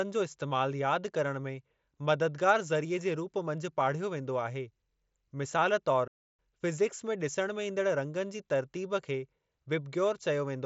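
At 6.07 s the speech cuts to silence for about 0.31 s, resuming at 6.39 s. It is a playback stall, likely the player running short of buffered data or its output thread being held up. The band-limited mSBC headset path, with nothing above 7.7 kHz, carries on unchanged either side.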